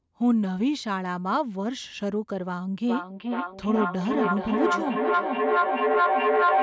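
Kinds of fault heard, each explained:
Feedback echo between two devices: a second device in the room replays this microphone's sound, which is picked up again, so from 2.87 s to the end each word returns roughly every 0.4 s. The repeats build to about 3 dB above the speech instead of decaying. A spectrogram shows stacked, evenly spaced smeared copies, and the waveform shows a thickening envelope.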